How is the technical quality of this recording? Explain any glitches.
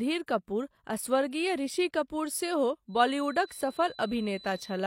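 The recording has one fault, a feedback whistle. From 2.87 s to the end, a steady 4 kHz tone rings about 25 dB below the speech, swelling and fading slowly. The likely cause is a loudspeaker-to-microphone loop sitting just short of runaway feedback.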